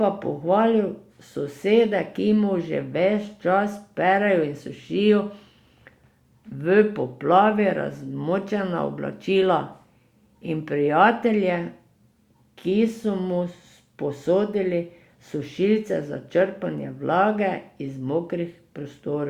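Nothing stood out on listening to the speech recording.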